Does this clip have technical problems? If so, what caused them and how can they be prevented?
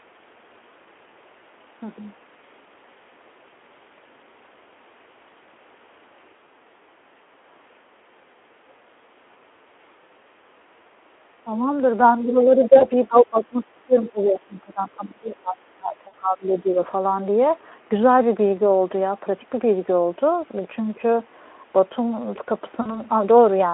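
Yes. Three kinds of fault can be heard.

Speech suppressed in double talk shows up as sudden dips in level. A short one hits at 11.44 to 11.49 s, dropping about 15 dB. Longer ones run from 12.24 to 13.66 s, with about 20 dB of loss, and from 13.86 to 16.76 s, reaching about 25 dB. The likely cause is an echo canceller that heard both sides at once. It treated the talker as echo and pulled the level down. Prevention: use a canceller with better double-talk detection, or have the talker wear a headset.

VoIP packet loss concealed by the speech codec occurs at 12.78 to 12.86 s, 16.07 to 16.14 s and 22.81 to 23.01 s. Each gap is short, 40 or 60 ms, which fits two or three lost 20 ms frames. The decoder fills the gap by repeating its last pitch and spectral shape at falling gain. This gives a brief buzzy or smeared sound. The voice then takes a moment to recover. Prevention: use a jitter buffer with forward error correction, or a less congested network path.

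Other side's voice leaking through appears at 14.03 to 14.09 s. A faint second voice sits about 25 dB below the main speech. It likely comes from the far end's audio playing on the talker's loudspeaker and reaching the microphone. The echo canceller did not remove all of it, so a scrap slips past. This happens inside the longer suppressed stretch. Prevention: use headphones at the talker's end, or improve the canceller's echo path modelling.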